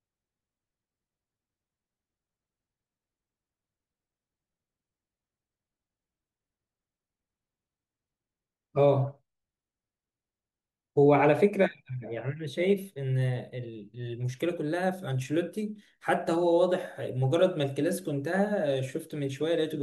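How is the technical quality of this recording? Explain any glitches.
No glitches or faults can be heard in this recording.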